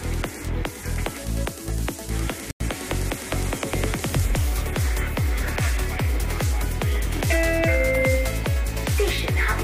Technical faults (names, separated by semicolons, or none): corrupt frame muted